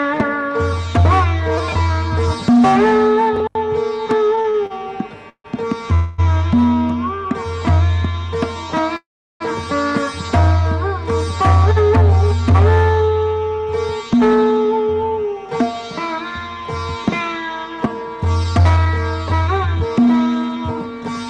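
From 4.35 s to 5.46 s the audio shows repeated stalls (stutter). Packets arrived late often enough that the jitter buffer ran dry five times in about a second. Each time, the receiver extended the last sound to bridge the wait. The gaps total 276 ms, the longest 148 ms, so about a quarter of that span is filled-in material. Nothing is lost, but the sound drags and hiccups, pausing and resuming unevenly.

At 5.94 s a call audio freeze holds the sound for 239 ms, until 6.20 s. The fill is a continued tail of the last sound with no silent stretch, and the audio then resumes where it stopped, 239 ms later than before. A second, longer freeze runs from 8.97 s to 9.42 s. It fills 436 ms, of which 360 ms has faded to silence, and then the sound picks up again without anything missing. Both pauses likely come from packets held up in the network, emptying the jitter buffer until they arrived.

From 13.59 s to 21.28 s a jitter buffer speed-up runs the audio at 106 % of normal speed. 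The buffer had built up more delay than its target, so the receiver trimmed many short pitch-period slices in succession, about 0.4 s in total. Pitch stays the same, but the sound is audibly hurried and its timing is compressed.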